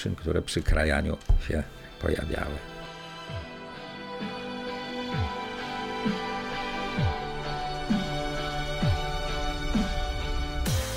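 There are no technical faults to describe in this clip.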